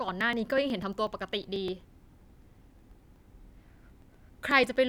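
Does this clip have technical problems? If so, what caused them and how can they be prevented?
Yes, there are periodic USB or driver dropouts: from 0.09 to 4.76 s the speech gets a tick every 0.123 s, around forty in all. Something is stalling the USB bus or audio driver on a fixed cycle, and each stall skips a couple of milliseconds of audio outright. To prevent it, track down whatever background task is polling on that interval and stop it, or move the interface to its own USB controller with a larger buffer.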